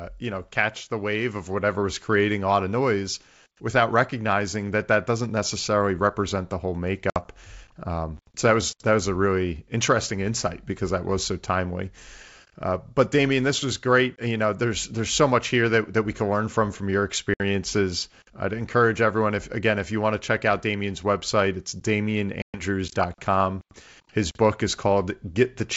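Packet loss on an ADPCM call cuts hard silent holes at 7.10 s after "necessarily represent the whole" (60 ms), 14.16 s after "this was great" (20 ms), 17.34 s after "learn from from your" (60 ms) and 22.42 s (120 ms). Unlike a clean dropout, each resumes slightly distorted while the decoder's predictor resynchronises.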